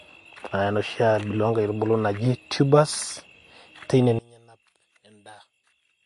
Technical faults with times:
0.00-6.05 MP3 compression
4.19-6.05 one channel inverted

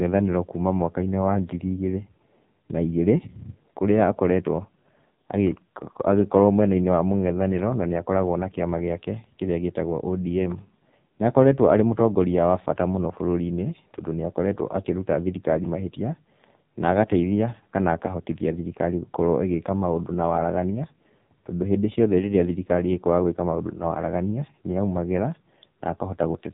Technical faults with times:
0.00-26.54 AMR narrowband mobile codec

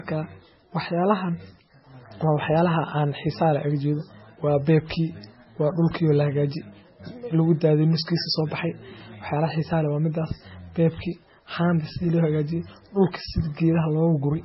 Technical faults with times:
0.00-14.44 MP3 compression
0.45-14.44 USB whine

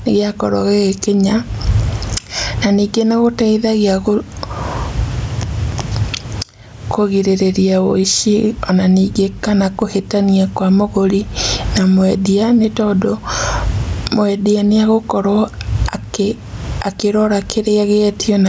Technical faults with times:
0.00-18.48 gain pumping

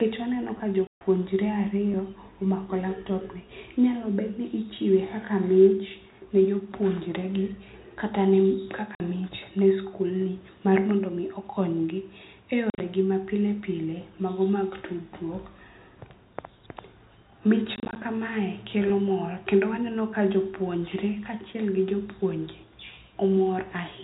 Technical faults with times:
0.58-0.60 repeated buffer
0.87-1.01 packet loss filled with silence
1.92-1.94 repeated buffer
8.95-9.00 packet loss filled with silence
12.70-12.80 packet loss filled with silence
17.76-17.96 packet loss filled with silence
18.88 repeated buffer

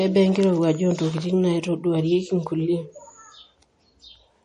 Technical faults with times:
0.00-4.44 MP3 compression

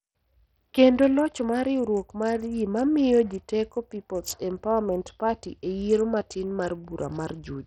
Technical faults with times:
0.00-7.67 Bluetooth SBC compression

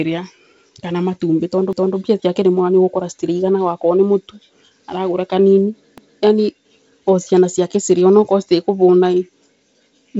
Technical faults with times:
1.73-1.98 overlapping chunks
5.98-6.23 overlapping chunks

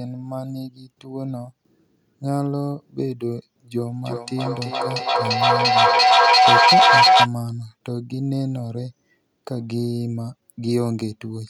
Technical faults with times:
3.87-7.31 feedback echo between two devices

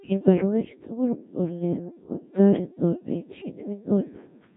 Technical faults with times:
0.00-4.56 Codec 2 vocoder

